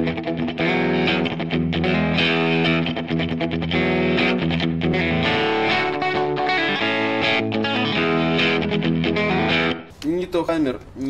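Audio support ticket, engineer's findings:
Short glitches at 4.93, 7.39 and 10.47 s, each under 20 ms. Looks like damaged data in a compressed stream. Decoder hits bad bytes, loses frame sync, glitches briefly while hunting for the next header, then recovers. Worth checking the source file or transport.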